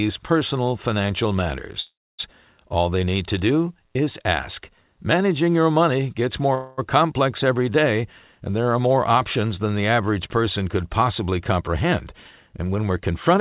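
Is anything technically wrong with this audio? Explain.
Yes. There are two call audio freezes and a jitter buffer speed-up, all heard through telephone-band sound with nothing above 4 kHz, which fits G.711 coding.

Call audio freezes at 1.8–2.21 s and 6.55–6.80 s: the likely cause is delayed packets draining the jitter buffer. The receiver stretched the last sound into a fading buzz, 386 ms in the first case, ending in 260 ms of silence, and 230 ms in the second. Nothing is lost, but each freeze adds its length to the delay.

Jitter buffer speed-up from 11.51 to 13.39 s: the receiver trimmed pitch-period slices repeatedly to work off the built-up delay, removing about 150 ms in total. The sound plays at 107% speed with unchanged pitch, giving a slightly hurried feel.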